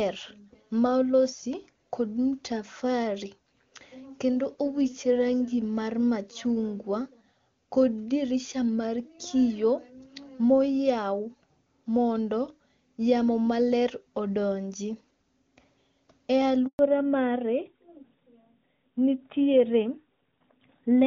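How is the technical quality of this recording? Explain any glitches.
The speech carries two connected glitches, both around a network handover late in the recording; before that the wideband coding sounds clean, consistent with HD Voice at around 23.85 kbit/s.

From 16.67 to 16.79 s there is a handover gap: the link switched networks, no speech frames arrived for 120 ms, and the sound drops abruptly to silence.

From 16.79 s to the end comes a fallback to narrowband: the call renegotiated to a narrowband codec, likely AMR-NB at 12.2 kbit/s, so nothing above 4 kHz survives and speech sounds duller and muffled.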